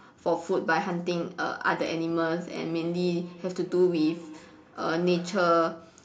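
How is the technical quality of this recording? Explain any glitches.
There's one real problem here. From 2.69 to 5.67 s you get feedback echo between two devices: a second device in the room replays the speech, this mic hears it again, and its canceller can't touch it. Each bit comes back roughly every fifth of a second, thin and ringy, peaking about 20 dB under the speech.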